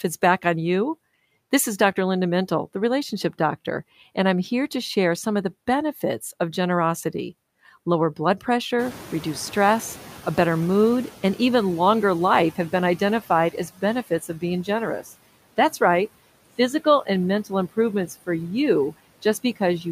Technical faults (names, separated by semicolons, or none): noise suppressor artifacts; noise suppressor catching up; speech cut by the noise suppressor